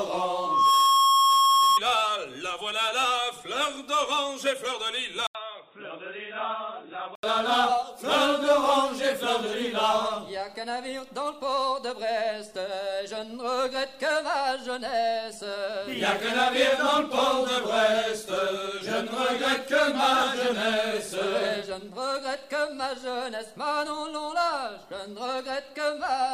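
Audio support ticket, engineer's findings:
Loudspeaker feedback squeal, 0.32–1.80 s: single 1.1 kHz tone swelling in under half a second to roughly 10 dB above the signal. Mic-to-speaker loop gain exceeding unity at that frequency. Self-building growth distinguishes it from steady electrical whine.

Input switched to a poorer device, 5.27–7.23 s: 80 ms dropout, then dull band-limited sound, nothing above 3.8 kHz, level down about 10 dB, new noise floor roughly 40 dB below. Likely headset call profile. Gap plus noise change rules out EQ.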